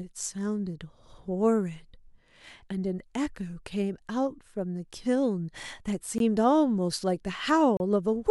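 At 6.18 s the speech drops to silence for about 19 ms, and from 7.77 to 7.80 s it cuts out again for 32 ms. Both are most likely a Bluetooth stall, where radio interference delayed packets long enough for the headphone buffer to empty and playback to pause until the resent data arrived. A stall leaves a clean, brief hole of true silence, with no smeared, repeated or filled-in sound like the patch that loss concealment would make.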